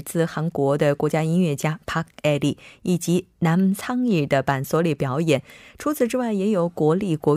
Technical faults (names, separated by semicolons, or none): hard clipping